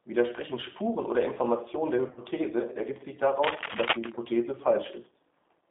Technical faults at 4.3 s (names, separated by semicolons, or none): G.729 codec; VoIP packet loss concealed by the speech codec